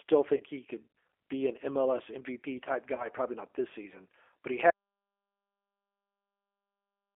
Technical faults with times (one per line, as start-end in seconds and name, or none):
0.00-7.15 G.729 codec
0.37-0.43 VoIP packet loss concealed by the speech codec
2.95-3.08 VoIP packet loss concealed by the speech codec
4.70-7.15 audio dropout to silence